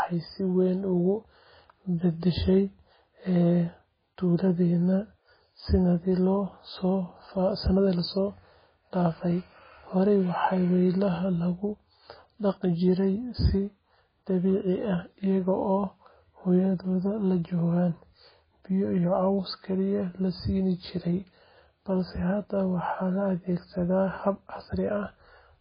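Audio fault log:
Throughout, MP3 compression: the speech is dull, with nothing above 5 kHz, and sounds heavily watery and swirly, with smeared consonant attacks. That points to a bitrate around 16 kbps, likely from an encoder zeroing weak lines frame by frame. A plain low-pass filter would sound dull but stay steady, without the swirl.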